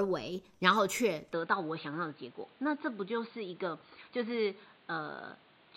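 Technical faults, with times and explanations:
1.33 to 5.76 s, input switched to a poorer device: from 1.33 s the speech abruptly turns dull and boxy, with nothing above 4.6 kHz and a new noise floor roughly 30 dB below the signal. The level holds steady, with no gap at the change. The likely cause is a switch to a narrower-band microphone or headset call profile.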